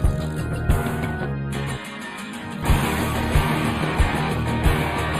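From start to finish, the audio carries channel delay (comb filtering). One channel lags the other by roughly a tenth of a millisecond, which points to an offset of about four samples, and when the two are summed to mono the shared content cancels at regularly spaced frequencies. The first notch falls near 5 kHz, so the upper range loses presence and the whole sound comes across as hollow, phasey and dull.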